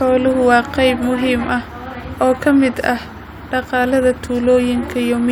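No audible technical faults.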